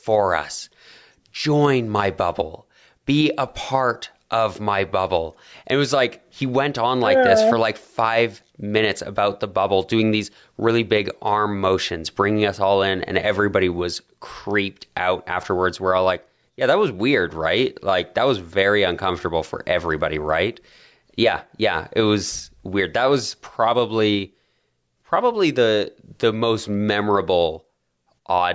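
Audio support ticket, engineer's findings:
Speech audio reviewed end to end with no audible defects found, so nothing to attribute to any component and no action needed.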